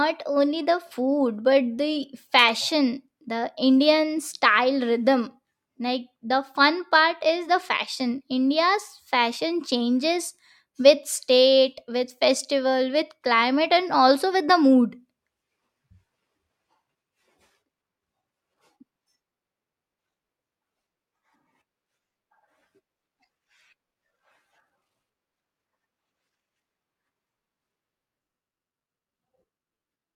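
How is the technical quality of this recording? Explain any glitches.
No technical glitches can be heard anywhere in this speech recording. There is nothing that needs explaining.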